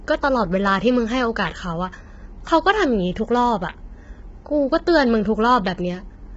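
From start to end, the speech sounds rough and grainy, with noise filling the gaps between harmonics and nothing above 7.7 kHz. This is likely low-delay AAC compression, where short frames resolve pitch poorly; the heavy damage fits a bitrate near 16 kbps.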